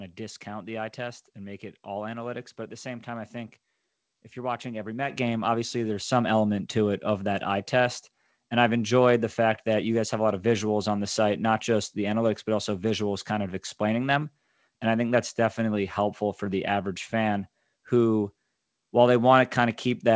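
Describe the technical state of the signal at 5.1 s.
At 5.1 s the microphone volume stepped up: the call software judged the input too quiet and raised the device's input gain in a single step of about 8 dB. The speech and the background noise jump louder together at that instant and stay at the higher level. The band-limited sound of the call codec, with nothing above 8 kHz as fits 64 kbps G.722, carries through the change unaltered.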